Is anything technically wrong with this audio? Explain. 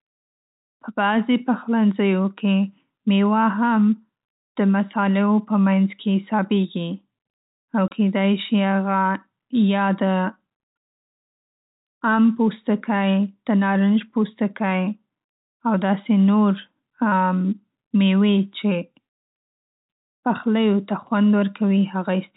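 Yes. At 7.88 to 7.91 s the speech drops out for 30 ms: packet loss filled with silence, a gap that fits three lost 10 ms packets. The receiver put pure silence there instead of concealing the loss, so the hole has hard edges. Concealment would smear or repeat sound. The telephone band above 4 kHz is absent, as G.711 coding expects.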